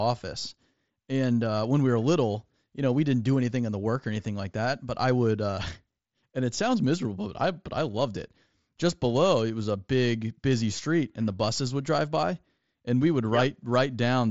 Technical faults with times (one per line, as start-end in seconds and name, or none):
none